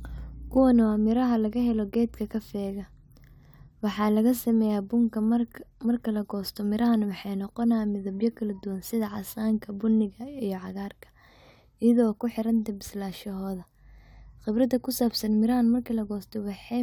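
No technical faults can be heard anywhere in the speech, and the signal stays steady and continuous throughout.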